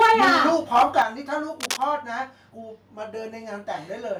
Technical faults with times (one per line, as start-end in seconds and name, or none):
0.00-0.49 microphone overload
0.02 microphone volume stepped down
0.75-1.02 microphone overload
1.02 microphone volume stepped down
1.60-1.85 cable scratch noise